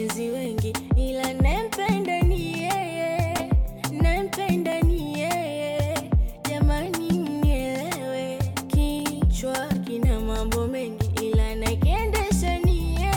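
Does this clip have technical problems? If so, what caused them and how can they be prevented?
Yes. From 0.45 s to the end, a regular click recurs every 1.07 s. These are clock drift buffer slips, likely from two devices whose clocks differ by roughly 300 ppm. Each slip drops or repeats about fifteen samples. Locking both devices to one clock, or adding adaptive resampling, prevents this.

Short concealed packet loss appears at 3.37–3.41 s and 9.73–9.76 s. Each time, about 20 ms of audio never arrived. The receiver filled the gap by extending the previous sound, causing a brief smear. A deeper jitter buffer or forward error correction would reduce these gaps.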